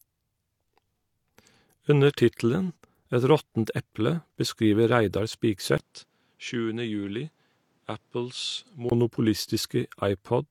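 Input switched to a poorer device, from 5.78 to 8.92 s: after a 20 ms gap the speech loses everything above 10.3 kHz, drops around 5 dB and gains a new noise floor roughly 40 dB down, likely from a change to another microphone, until the fuller sound returns.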